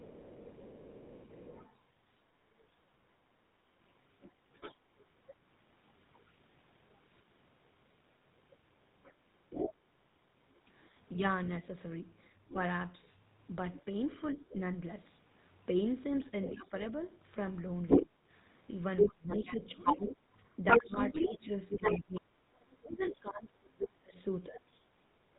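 Speech carried over the GSM full-rate codec throughout at 13 kbps has a plainly buzzy, gravelly texture, and a spectrogram shows nothing above 4 kHz. The other side's voice leaks through, likely from loudspeaker echo the canceller missed. It is faint from 0 to 6.95 s and from 12.24 to 14.53 s, about as loud as the talker from 9.03 to 10.6 s, louder than the talker from 16.45 to 23.19 s, and barely there at 25.34 s. It appears as a second, overlapping harmonic pattern. GSM bit errors at about 1.1% and 1.3% cause squawks and gargling from 0.46 to 0.53 s and 21.14 to 21.26 s, seen as sudden smeared bursts or level spikes in the waveform. From 16.57 to 24.9 s the talker's speech is suppressed in double talk, likely because the echo canceller turned both voices down. Gaps totalling about four seconds dip by up to about 30 dB, leaving the waveform's envelope visibly chopped.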